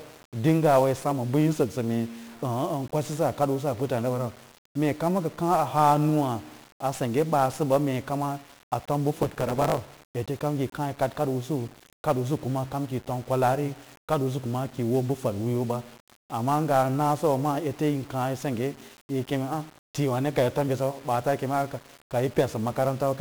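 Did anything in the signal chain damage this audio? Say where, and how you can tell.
Yes. At the codec stage, 1-bit DFPWM compression runs through the whole clip: heavy fuzzy, crackly noise with treble buried in hiss, which points to a one-bit stream near 48 kbps. A spectrogram shows a broadband noise floor smearing every frame.

Between 9.13 and 10.05 s a block size mismatch (truncated) appears in the buffer stage. The tail of each block is discarded, producing a 109 Hz buzz and speech running 1.09 times fast. The waveform shows regular discontinuities; the spectrogram shows 109 Hz harmonic striping.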